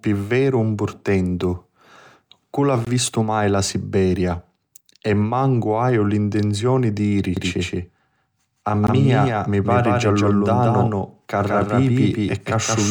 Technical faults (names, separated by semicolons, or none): gap at a join of encoded pieces; doubled audio track